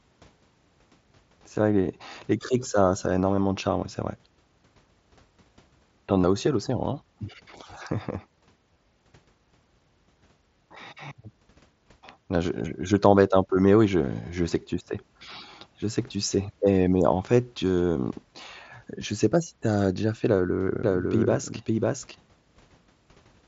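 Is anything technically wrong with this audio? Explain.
Yes. There are two faults in this speech clip.

Concealed Bluetooth headset packet loss occurs at 3.36 s, between "criques ça ça a" and "de charme". It occurs again at 6.21–6.24 s, before "as aussi à l'océan", and at 8.74–8.76 s. Lost headset packets were patched by repeating recent waveform. Each gap lasts 15–23 ms, so it is heard as a brief buzzy tone with a small warble where real audio returns.

A doubled audio track runs from 20.8 s to the end. A second, roughly equal-level copy trails by around half a second, likely from a slower capture path. It sounds like a dry, abrupt echo with no room decay.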